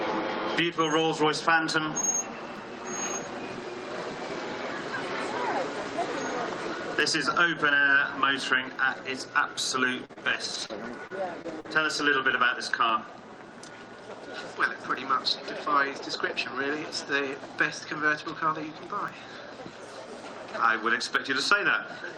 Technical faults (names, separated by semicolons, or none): clock drift buffer slips; scattered short gaps